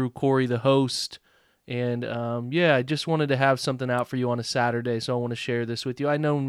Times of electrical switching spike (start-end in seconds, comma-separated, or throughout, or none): 3.99